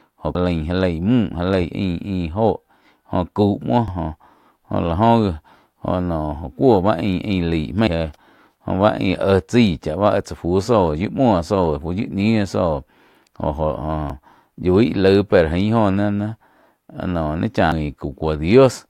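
At 0.35, 3.88, 14.10 and 17.72 s the speech carries a brief chirp or blip from damaged data in the compressed stream: corrupted bytes make the decoder misread those frames and lose sync until it finds the next valid frame header.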